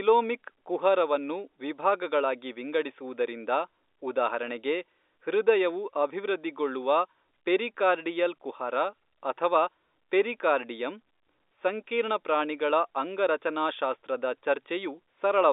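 Packet loss with pitch repetition at 7.72 to 7.74 s interrupts this telephone-band speech recording. About 20 ms of audio is missing, which fits a single dropped packet. The receiver fills the gap by repeating the last pitch period, so the sound briefly holds with a slight buzz.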